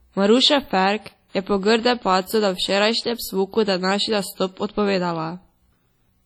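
Throughout the speech, ringing, washy hiss breathes with the signal, likely from heavy WMA compression near 32 kbps; spectrograms show smeared, patchy upper bands.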